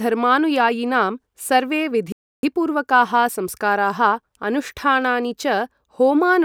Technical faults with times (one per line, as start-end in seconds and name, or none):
2.12-2.43 playback stall